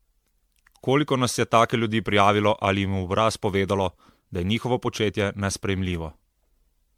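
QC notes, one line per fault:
Throughout, generation loss: the speech has a swirly, smeared, hollow quality, with consonant attacks blurred and softened. This points to repeated lossy coding, which fits MP3 at around 96 kbit/s decoded and re-encoded about ten times. Each pass likely requantised the signal on a shifted frame grid, so quantisation noise and spectral holes piled up beyond what one encode at that rate would leave. The content stops near 19.9 kHz.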